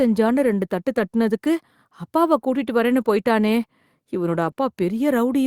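At 0.93 to 0.97 s, just after "ரெண்டு தட்டு", a short concealed packet loss occurs: about 20 ms of audio never reached the decoder in time, so the receiver extended the preceding sound to cover the hole before blending back, leaving a brief smear across the join. Immediately after, from 0.97 to 0.99 s, comes a lost packet rebuilt from error correction: one 20 ms packet went missing, and the decoder played the low-bitrate copy carried in the next packet, so there is no gap, but that stretch sounds rougher and grainier. The same pairing returns in reverse order after "கூட்டிட்டு வரேன்னு போய்ட்டானே இவனோட": a single 20 ms packet rebuilt from its error-correction copy at 4.47 to 4.49 s, with the same rough texture, then another concealed loss at 4.51 to 4.55 s, where about 20 ms of synthesized continuation blurs the sound briefly.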